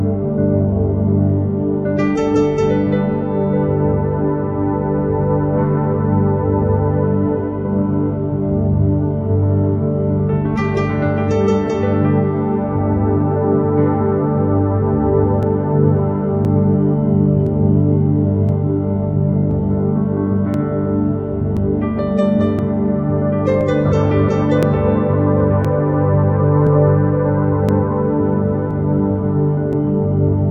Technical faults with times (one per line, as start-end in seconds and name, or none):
15.43-29.73 periodic USB or driver dropouts